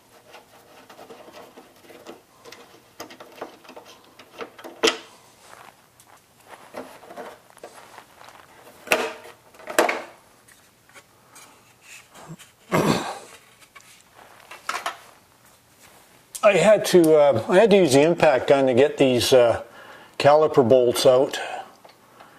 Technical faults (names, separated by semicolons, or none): none